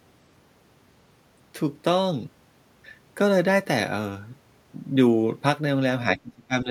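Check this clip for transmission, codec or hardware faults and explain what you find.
One fault is present: speech suppressed in double talk, from 6.16 s to the end of the clip at 6.7 s. The echo canceller likely could not separate the near talker from loudspeaker echo while both sides spoke at once, so it turned everything down together. For roughly the last half second, the speech sinks sharply, by about 25 dB at its deepest point, and drops back in level rather than running on naturally to the close.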